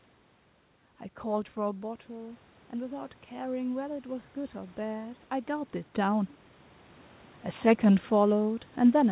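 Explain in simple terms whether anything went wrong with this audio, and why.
Something did go wrong between about 1.61 and 5.75 seconds: automatic gain rising. Around 1.5 seconds the talker seemed to drift back and got quieter, so the volume control slowly cranked itself up, and both the voice and the room noise swell together over those few seconds.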